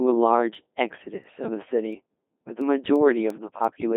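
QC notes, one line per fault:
Throughout: Codec 2 vocoder. Heavy damage leaves the speech robotic and buzzy, rebuilt from sine waves. The band runs 200 Hz to 3.7 kHz with nothing above 3.8 kHz, which fits a 2.4 kbit/s mode. Unlike a lossy waveform codec, this sound is resynthesised, not smeared.
0.21 to 3.96 s: word clock ticks. About ten sharp ticks of uneven strength arrive roughly every 0.3 s. Each is one dropped or repeated sample where two unlocked clocks slip, fitting an error of around 70 ppm. Unlike buffer dropouts, the regular spacing gives the cause away.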